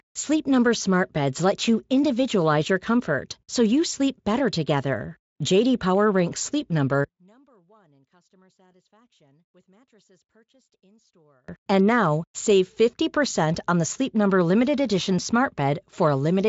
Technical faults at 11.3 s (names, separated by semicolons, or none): one channel inverted